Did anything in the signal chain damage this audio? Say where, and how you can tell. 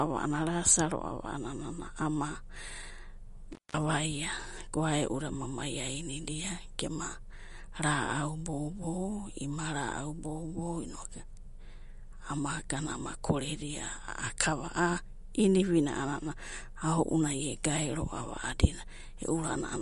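Yes. Throughout, the speech sounds watery and swirly, with smeared consonant attacks and nothing above 11.2 kHz. This points to the codec stage, likely MP3 encoding at a low bitrate around 48 kbps, where the encoder zeroes weak frequency lines frame by frame and cuts the treble at a fixed frequency.

From 3.52 to 3.77 s the sound breaks up and drops out for about 190 ms, with crackle at each edge and faint hiss left in the gap. That is an intermittent contact in the analogue wiring: a loose cable or plug briefly opened the line.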